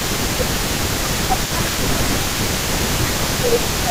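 From the very start and right through to the end, there's an echo leak: a delayed copy of the speech trails the original by about 288 ms, sitting roughly 10 dB below it. That's likely a far-end loudspeaker setup whose echo canceller let some of its mic pickup slip back down the line.

On top of that, from 0.1 to 2.61 s and again from 3.04 s to the end, there's speech suppressed in double talk. The level dips by up to roughly 10 dB, likely because the canceller couldn't separate the talker from the echo and ducked both.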